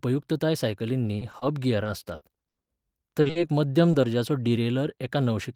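From 1.17 to 4.05 s the speech suffers repeated packet loss (robotic sound): thirteen gaps, the longest 80 ms, are patched by extending the preceding sound, about 440 ms in all. It sounds choppy. A spectrogram shows smeared, frozen harmonic patches where detail vanishes.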